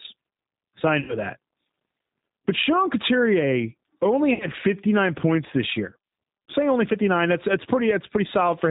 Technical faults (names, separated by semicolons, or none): G.729 codec; VoIP packet loss concealed by the speech codec